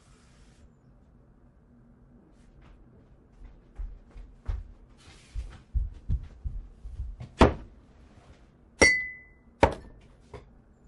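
A recording of everyday sounds, heard throughout with a watery, swirling texture, dulled treble and metallic chirps on bright sounds. This is likely MP3 compression at a low bitrate around 48 kbps, not broadband noise, because the damage comes and goes with the sound. Pre-echo appears at 7.37–7.40 s, 8.78–8.81 s and 9.60–9.63 s, where a hiss about 17, 24 and 18 dB above the surrounding noise fills roughly 30 ms before each sharp attack. Because the hiss comes before the hit rather than after it, it is not reverb. Its length points to the encoder staying on long blocks instead of switching to short ones.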